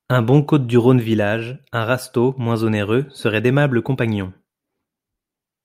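No technical faults can be heard anywhere in this speech recording. There is no event in it that needs a time or an explanation.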